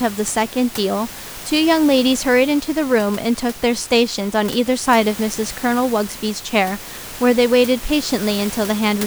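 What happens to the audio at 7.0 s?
Nothing goes wrong at 7.0 s: the speech is intact there, with only the room noise sitting about 16 dB below it.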